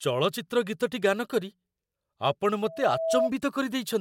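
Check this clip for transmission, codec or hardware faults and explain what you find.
One hardware fault is present: loudspeaker feedback squeal from 2.63 to 3.30 s. A 654 Hz tone swells over roughly half a second to a few dB above the speech as the mic-speaker loop exceeds unity gain, showing as a thickening horizontal line on a spectrogram.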